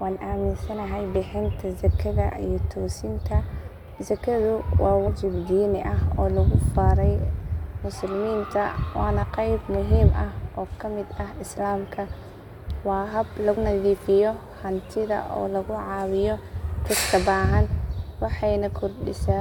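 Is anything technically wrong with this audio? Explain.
Yes. Compressed frames are skipped three times in this speech: at 5.06 s, just before "diini ah"; at 9.22 s, between "musliminta wana" and "qeyb muhiim ah"; and at 13.56 s, just after "waa haab". Whole 23.2 ms frames go missing, about five at the first two points (around 100 ms) and about three at the last (around 70 ms). The speech jumps forward rather than falling into a silent gap, which distinguishes it from a dropout.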